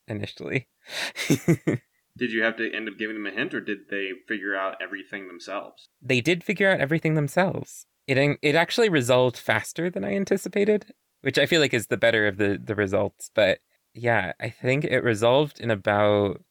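No technical faults can be heard anywhere in the speech recording, and the signal stays steady and intact throughout.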